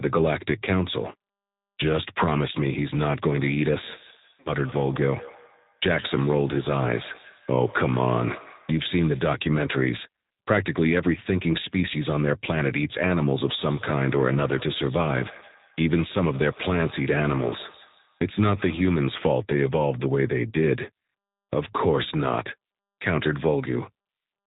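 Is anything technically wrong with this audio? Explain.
Yes. The whole recording has been passed through the G.729 codec at 8 kbit/s, and the speech carries two moments of VoIP packet loss concealed by the speech codec.

Throughout, the G.729 coding damage is plainly audible. The codec rebuilds each 10 ms frame from a vocal-tract filter, a pitch predictor and a handful of pulses, so speech comes out rough and faintly synthetic, with nothing above 4 kHz. A simple 4 kHz low-pass would sound dull but clean. Here the roughness and synthetic texture come from the model itself.

At 0.65 to 0.69 s, and again at 4.40 to 4.53 s, the decoder had no data to work from and extrapolated from its last pitch and filter, lowering the gain frame by frame. The first gap is about 20 ms, which fits a single lost packet. The second is about 60 ms, which points to three in a row. These stretches become a buzzy tone or coloured noise that fades rather than silence, which distinguishes them from a plain dropout. 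Because each frame builds on the last, the speech stays weak or distorted briefly after the gap ends.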